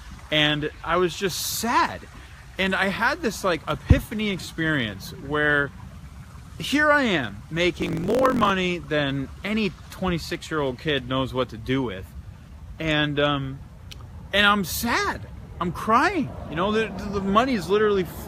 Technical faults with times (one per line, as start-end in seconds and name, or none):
7.76-8.51 block size mismatch (truncated)